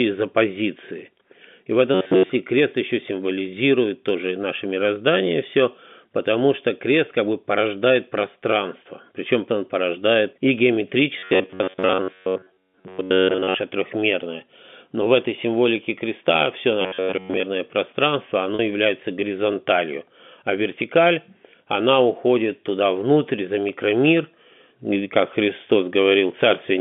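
Three times the audio buffer was likely starved: at 1.95 to 2.30 s, ending just before "крест еще символизирует тоже", at 11.19 to 13.57 s, and at 16.82 to 17.43 s, right after "этой символике креста все". Fresh audio arrived too slowly, so the player looped the last short block while most of the real signal, around two thirds of it, was dropped. This is robotic sound from repeated short buffers. Each block repeats at 93.8 Hz, which fits a block of roughly 10.7 ms, and that fixed rate stamps a rigid metallic buzz over the speech, which still loosely follows its shape.

At 18.55 to 18.59 s, just before "является горизонталью а вертикаль", 40 ms of audio went missing, which fits about four lost packets. The receiver covered the gap by repeating the last pitch period. This is packet loss with pitch repetition. It is heard as a brief held, buzzy tone bridging the hole, within the narrow 150 Hz to 3.5 kHz telephone band of the G.711 line.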